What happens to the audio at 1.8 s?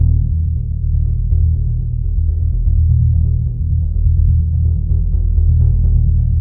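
Nothing goes wrong at 1.8 s; the music plays through that moment intact, with no dropout, click or other fault.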